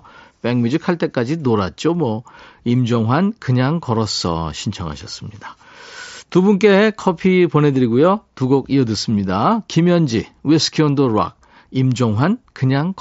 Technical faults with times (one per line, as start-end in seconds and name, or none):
none